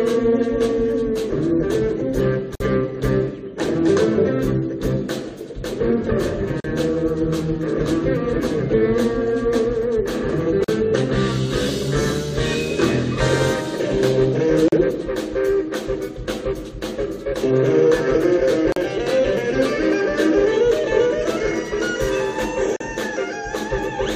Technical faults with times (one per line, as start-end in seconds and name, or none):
2.55-2.60 gap at a join of encoded pieces
6.60-6.64 gap at a join of encoded pieces
10.64-10.68 gap at a join of encoded pieces
14.68-14.72 gap at a join of encoded pieces
18.72-18.76 gap at a join of encoded pieces
22.76-22.80 gap at a join of encoded pieces